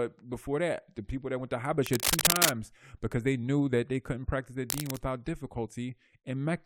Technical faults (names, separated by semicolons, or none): cable scratch noise